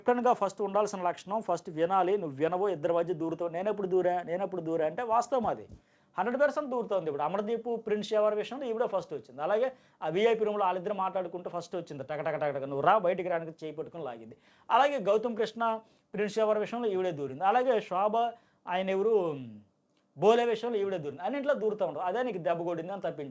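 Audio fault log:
No fault to log; the audio comes through a call codec that carries nothing above 8 kHz.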